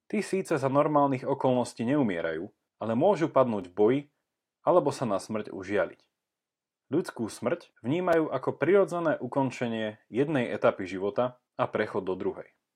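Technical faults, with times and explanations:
3.62 s and 8.13 s, block of digital silence: each is a sharp tick or tiny pop in the speech. The signal drops straight to silence and back with no fade, for about 1.5 ms at 3.62 s, which fits a 64-sample buffer, and about 5 ms at 8.13 s, so the abrupt edges click. The output buffer was likely left empty.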